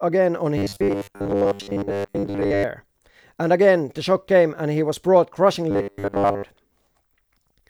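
From 0.58 to 2.64 s and again from 5.71 to 6.43 s, the speech turns into a rigid, metallic 100 Hz buzz that loosely tracks the words: robotic sound from repeated short buffers, likely a 10 ms chunk replayed for most of each span while new audio arrived too late.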